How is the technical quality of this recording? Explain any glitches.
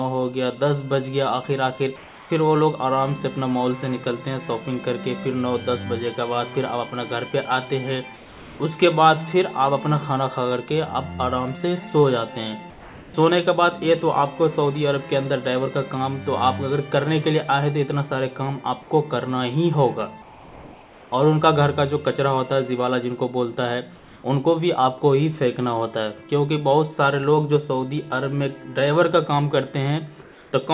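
The recording has one recurring fault: comfort noise in place of the background. It appears at 1.96–2.3, 8.16–8.6, 12.7–13.14, 20.22–21.12, 23.96–24.24 and 30.22–30.52 s. In each gap the real background, some 22 to 29 dB below the loud parts, becomes flat, featureless hiss, about 1 to 4 dB quieter. This is likely discontinuous transmission: the sender goes silent and the receiver synthesises stand-in noise. The whole clip, including these gaps, has nothing above 4 kHz, which fits a narrowband call codec.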